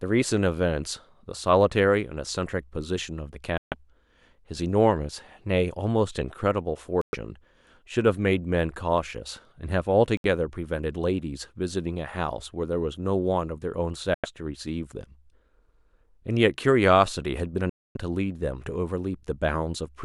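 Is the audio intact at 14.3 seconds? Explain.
No. A Bluetooth dropout leaves a sudden hole of silence from 14.14 to 14.26 s, and at 14.3 s the sound has only just come back with roughly 90 ms of content missing, so it skips ahead. The likely cause is wireless packets, probably about four, failing to reach the headphones in time and being discarded. Playback resumes at the point where it would have been had it continued.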